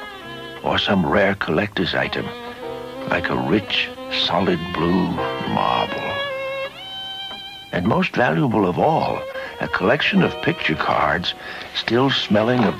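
A short glitch of misplaced energy at 9.28 to 9.35 s, then a much louder burst at 11.86 to 11.88 s: each is a corrupt frame decoded, where flipped bits in a few compressed frames were played anyway, scattering energy to wrong frequencies.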